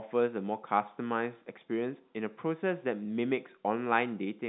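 No technical faults turn up anywhere in the clip, so there is nothing to describe in time order.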